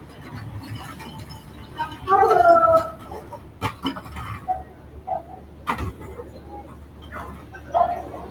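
The noise suppressor mistook part of these sounds for noise between 5.5 and 5.66 s, a stretch of roughly 150 ms, and pulled its level down by up to about 4 dB. The result is a brief dip where that sound sinks below its surroundings.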